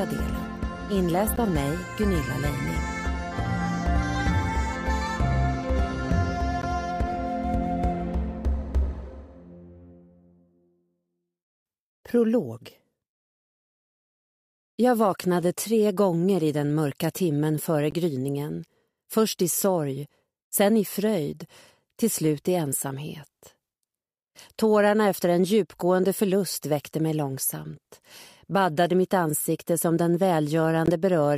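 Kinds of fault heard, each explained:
Bluetooth dropout: Four brief holes of silence cut into the sound at 1.36 to 1.38 s, 6.62 to 6.64 s, 17.91 to 17.95 s and 30.86 to 30.89 s. Each loses about 15 ms of material, and after each gap the audio resumes further along, as if it had kept playing. The likely cause is a wireless link failing to deliver a packet to the headphones in time, and each gap's short length fits a single lost frame.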